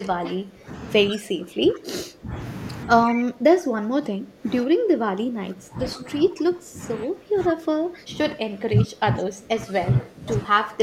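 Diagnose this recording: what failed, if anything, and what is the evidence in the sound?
The speech sinks by about 20 dB from 0.0 to 0.72 s, 1.11 to 2.38 s and 3.06 to 10.82 s. This is likely speech suppressed in double talk by call-processing echo cancellation.

A faint copy trails 141 ms behind, about 15 to 20 dB down, at 1.09 to 1.2 s and 3.08 to 3.17 s. This is likely echo leak past the far end's canceller.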